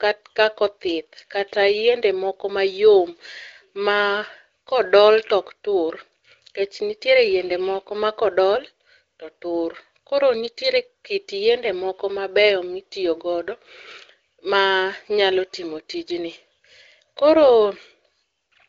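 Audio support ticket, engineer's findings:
No fault found; speech band tops out near 7.6 kHz with only faint coding texture, consistent with AMR wideband (HD Voice) running at a higher mode around 18 kbit/s.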